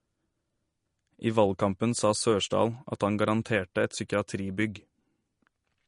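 Low-bitrate MP3 compression is the likely cause, and it runs throughout: starved of bits, the encoder discards everything above 10.6 kHz and drops weak frequency lines frame by frame, which fits roughly 40 kbps. The speech sounds dull, watery and swirly, with metallic chirping on sibilants.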